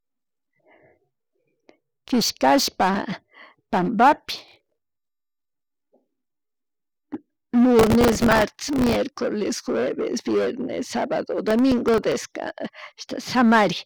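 Speech with gritty crackling bursts at 4.38–5.42 s, 7.79–8.96 s and 11.48–12.12 s after "jueves vienes sabado": processor overload crackle, where tiny buffers of around a millisecond and a half miss their deadlines and replay stale audio.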